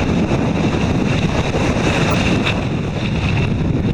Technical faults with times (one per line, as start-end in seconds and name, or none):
2.09-2.14 corrupt frame decoded